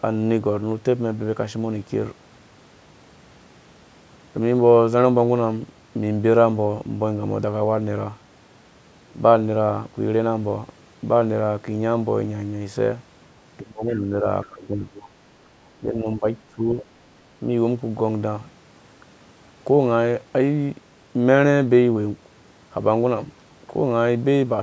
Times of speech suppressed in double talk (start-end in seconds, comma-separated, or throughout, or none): 13.60-15.13, 15.76-16.25, 16.50-16.79